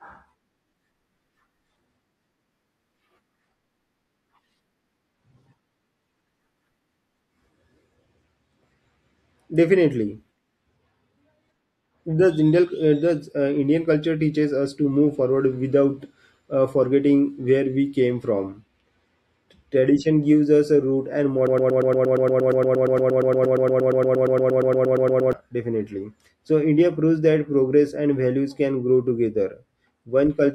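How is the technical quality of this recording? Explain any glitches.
The recording has one glitch, a broken-record loop from 21.47 to 25.33 s, right after "us a root and". A fragment of about 117 ms repeats exactly, back to back, 33 times, producing a rapid stutter. The player or stream likely stalled and kept replaying its last buffered piece, so the speech in that gap is lost.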